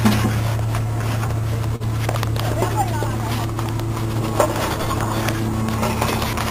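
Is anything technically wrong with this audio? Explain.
Yes. Between 1.01 and 1.82 s there are repeated stalls (stutter). Packets reached the receiver late, so its jitter buffer ran dry five times. Each time, the last sound was extended to cover about 78 ms in total, with the longest gap 43 ms. No content is lost, but the sound halts and drags. On a waveform the short held stretches look like repeated, near-identical cycles. A spectrogram shows brief, smeared horizontal bands at those points.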